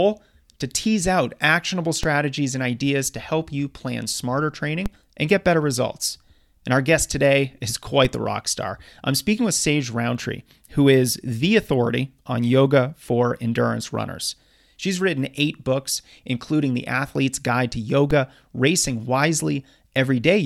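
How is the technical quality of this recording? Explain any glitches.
The recording has four DC steps, low thumps at 2.03 s (after "tease out actionable", before "and ideas to help"), 4.86 s (after "help you plan smarter", before "and get better results"), 8.05 s (after "our guest today is", before "the rock star I'm"), and 18.11 s. Each time the waveform's zero line jumps, by about -12 dBFS for the first two and about -15 dBFS for the last two, and then decays away through a 20 Hz high-pass. Unlike a dropout or a digital click, the sound is a low-frequency bump while the speech carries on intact.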